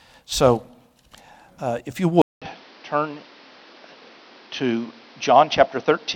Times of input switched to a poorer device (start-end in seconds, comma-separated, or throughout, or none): 2.22-6.15